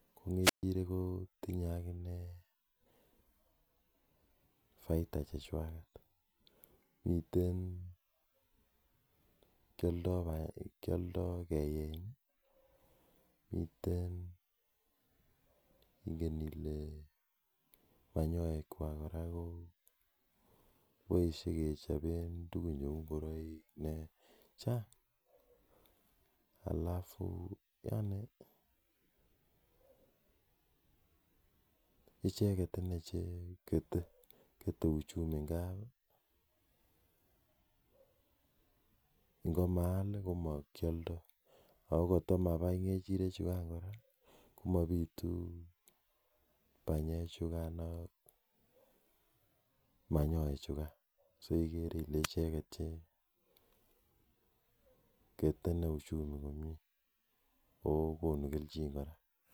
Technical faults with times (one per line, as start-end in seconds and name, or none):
0.42-0.63 wireless microphone squelch dropout
52.23-52.28 wireless microphone squelch dropout